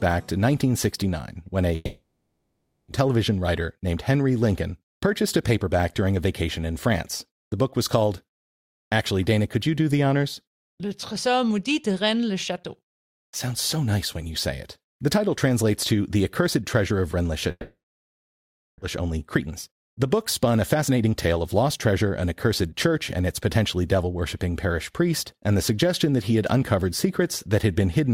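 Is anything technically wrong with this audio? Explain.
Yes. Two kinds of fault are audible in this speech clip.

Long network dropouts occur at 1.75 to 2.92 s and 17.51 to 18.84 s. The last sound trails off into a fading buzz or hiss. Silence follows for about 0.88 s, then about 1.07 s. Each time, a second of speech is skipped. Lost packets are the likely cause.

Jitter buffer speed-ups follow at 3.66 to 3.96 s, 4.87 to 6.43 s and 19.01 to 21.55 s. The receiver trims tiny pitch-period slices to shrink excess delay. Speech runs 6 to 10 percent faster at unchanged pitch. It sounds hurried, losing a few tenths of a second.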